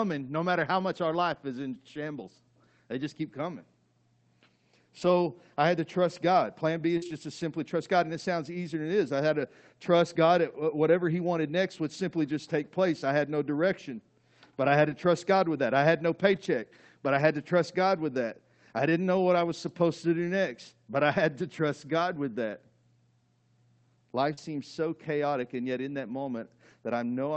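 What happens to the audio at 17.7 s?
Nothing goes wrong at 17.7 s: the speech there carries straight through with no dropout, glitch or distortion, just the band-limited sound of the call codec that runs throughout.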